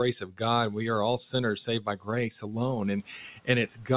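Speech cut by the noise suppressor occurs at 0.20–0.41 s, 1.67–2.08 s, 2.41–2.55 s and 3.67–3.90 s. The suppressor misreads low-level speech as noise and pulls it down by about 9 to 12 dB, so word edges sound swallowed and faint.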